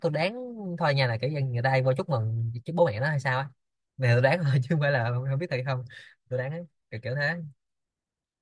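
Nothing technically wrong turns up anywhere in this speech recording, so there's no fault to point to.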